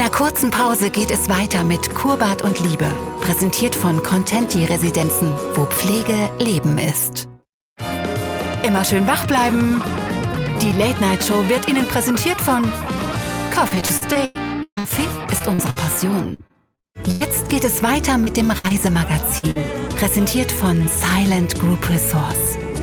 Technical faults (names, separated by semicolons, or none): repeated packet loss (robotic sound); burst of packet loss; short concealed packet loss